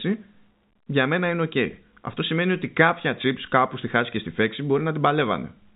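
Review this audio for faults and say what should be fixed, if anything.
No faults; nothing needs fixing.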